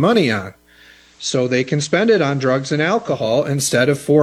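At 0.85 s the audio shows digital radio blending to analogue: the receiver lost its digital stream and cross-faded over about 333 ms to the station's FM broadcast. The level drops by about 3 dB and hiss appears well below the signal. It blends back to digital at 3.38 s.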